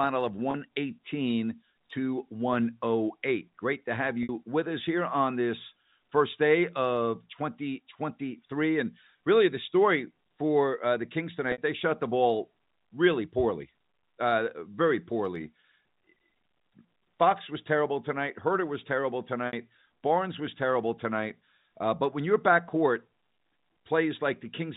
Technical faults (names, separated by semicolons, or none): packet loss with pitch repetition